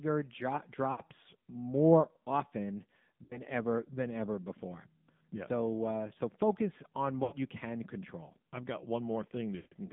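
From the start the speech is squeezed into a band of roughly 150 Hz to 3.6 kHz and sounds buzzy and synthetic. This is the AMR narrowband mobile codec, rebuilding the voice from a vocal-tract model and a few pulses, which fits a low mode such as 7.4 kbps. A plain band limit would keep the tone natural rather than turning it buzzy.

Lost AMR speech frames occur at 0.92, 3.24, 7.24 and 9.56 s. The decoder repeats the last good voice settings with falling gain, so each gap stretches the sound into a brief warble instead of a hard, silent cut. The first three last about 60 to 80 ms, and the 160 ms loss at 9.56 s fades fully to silence.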